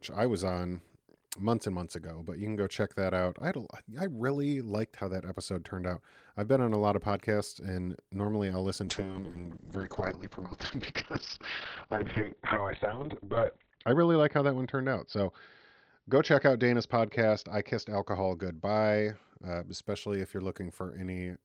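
From 8.86 s, just after "podcasts and normally I'll", a call bitrate drop takes the speech from 32 to 7 kbps, holding the floor for about 4.9 s. The encoder codes coarsely and narrows the band from 20 kHz to 4 kHz, leaving it muffled and watery until 19.89 s, before "if you're".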